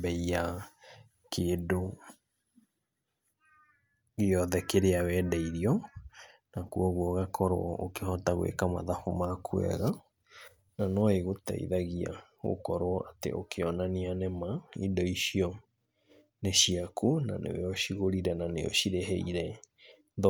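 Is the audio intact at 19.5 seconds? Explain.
Yes, the speech at 19.5 seconds comes through intact, with no dropout, click, distortion or other fault at that moment.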